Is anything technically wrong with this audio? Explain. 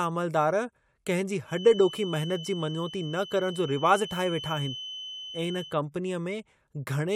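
Yes. A feedback whistle runs from 1.43 s to 5.79 s, starting just after "कंहिं जी". A loudspeaker-to-microphone loop likely hovered at the edge of oscillation, sustaining one 3 kHz tone without building up. It sits as a thin, slightly wavering whistle well below the speech.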